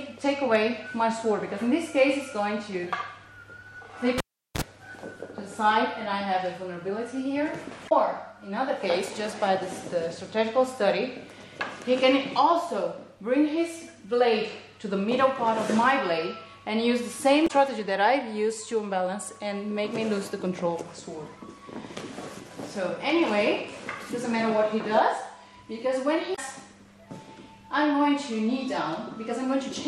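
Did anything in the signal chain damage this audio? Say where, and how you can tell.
Yes. A cable pulled and plugged in at the analogue wiring stage, 4.18 to 4.62 s: a pop, about 0.39 s of near silence, then roughly 42 ms of 60 Hz mains buzz as only the plug tip makes contact, and a second pop when the full connection returns.

Damaged data in a compressed stream at the codec or storage stage, at 7.85, 17.44 and 26.32 s, each lasting about 70 ms. Corrupted bytes make the decoder misread its frames and lose sync until it finds the next frame header, producing a brief chirp, squawk, click or short hole.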